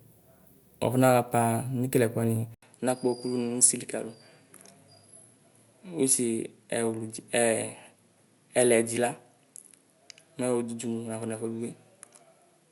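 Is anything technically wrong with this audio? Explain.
Yes. At 2.54 s, just after "wuafɔnaɣapa nekeleɛkuni", the speech drops out for 80 ms. It returns on a duller-sounding input that lasts to the end. This is likely an input switched to a poorer device, with recording moving to a different microphone or headset path. The new path passes nothing above 11.4 kHz, so the top air is gone. A new background noise floor appears, about 45 dB below the speech. Loudness stays about the same.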